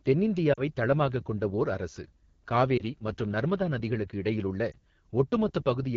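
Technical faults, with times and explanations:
Throughout: AMR wideband (HD Voice) codec. The encoder runs near the bottom of its rate ladder, which fits the 8.85 kbit/s mode, so the pulse excitation is too sparse to model the voice well. The speech sounds plainly rough and raspy, with a noisy, artificial top band.
0.53 to 0.62 s, 2.77 to 2.82 s and 4.71 to 4.74 s: lost AMR speech frames. Corrupted frames forced the decoder to reuse the previous pitch and vocal tract settings at falling gain. The first gap fits two 20 ms frames and drops to near silence. The later two are single-frame dips or warbles.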